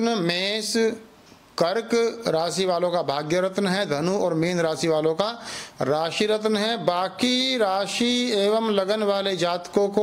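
No technical faults are audible.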